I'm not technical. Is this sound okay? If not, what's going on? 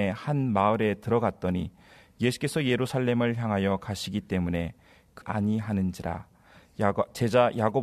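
No. At about 5.20 seconds there is a tiny glitch, a quick blip in the speech that lasts only a split second. This is damaged data in a compressed stream. The file stores sound in small packed chunks. Here some bytes in one spot were lost or garbled. The player couldn't read that piece correctly, so for an instant the sound broke up. Then it found the next clean chunk and carried on.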